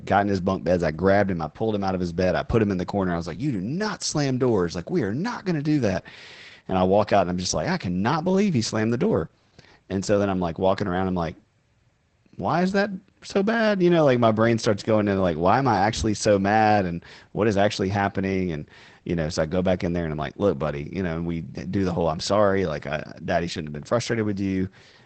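Throughout, Opus voice compression (SILK, wideband, a bitrate suggesting 12 kbps) cuts everything above 8.5 kHz and codes the speech coarsely, leaving it muffled and hoarse.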